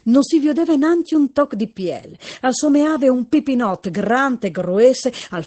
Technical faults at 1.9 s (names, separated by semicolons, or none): Opus voice compression